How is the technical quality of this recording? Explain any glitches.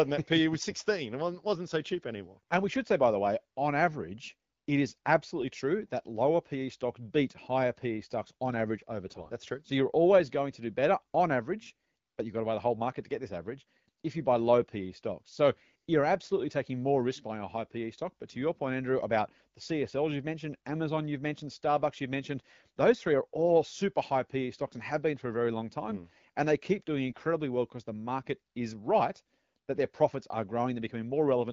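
The speech is carried by a wideband phone codec, and its clarity fits AMR-WB at 12.65 kbit/s. Two short glitches interrupt it.

AMR bit errors occur at 9.06–9.31 s, just after "stocks on average over", and at 27.10–27.22 s, between "they keep doing" and "well because the market". Corrupted bits misplace the excitation pulses and skew fine parameters, so the voice turns gargly and scratchy while keeping its pitch and level, rather than dropping out as with packet loss.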